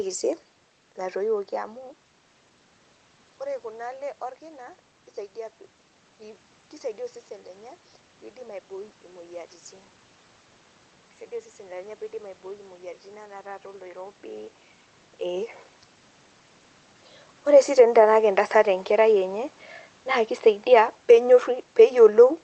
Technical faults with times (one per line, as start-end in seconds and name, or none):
20.58-22.34 automatic gain falling